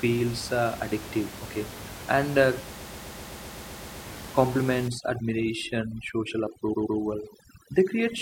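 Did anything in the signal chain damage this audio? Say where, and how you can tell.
Yes. Repeated frames at the codec or storage stage: a 128 ms block stutters from 2.76 to 4.04 s (ten extra plays) and again at 6.73 to 6.98 s (two).

Overdone noise removal in call processing from 4.88 s to the end. The room noise, roughly 14 dB below the speech, collapses into twinkly near-silence.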